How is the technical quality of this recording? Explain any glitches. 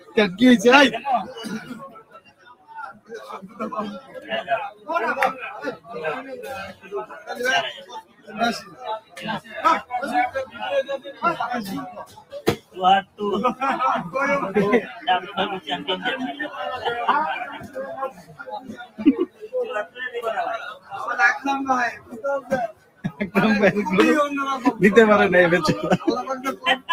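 The technical quality is compromised by a speech noise suppressor left running on non-speech audio.

A noise suppressor applied to music or sounds is active through the whole recording. It mistakes steady tones, ambience and decaying tails for background noise. It pulls them down, then lets them back up when something sharper arrives. The level swings by around 15 dB as a result. The sound pumps and flutters. Sustained parts thin out while onsets mostly get through.

Sound cut by the noise suppressor is clearest in five stretches: 0.00 to 0.17 s, 1.62 to 13.2 s, 14.94 to 20.92 s, 21.93 to 23.2 s, and 26.56 to 26.89 s. The first dips by about 11 dB. The others reach about 17 dB. The longest stretch spends roughly five seconds held down. Here held material sinks and decays are clipped short. Sudden hits mostly come through.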